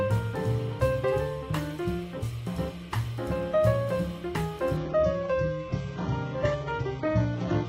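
At 4.77 s the audio shifts abruptly into an adaptive stream at a lower bitrate and stays there until the end at 7.68 s. The connection evidently slowed, so playback switched to a leaner encoding, which fits a drop from a mid-rate AAC stream to a very low-rate HE-AAC one. The treble thins, with smeared, watery artefacts. A spectrogram shows content above 7.9 kHz cut off sharply at that moment, while the waveform runs on without any gap.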